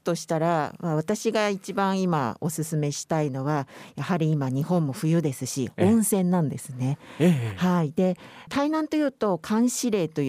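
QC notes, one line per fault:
No faults were found in the speech clip. There is nothing to log against any time.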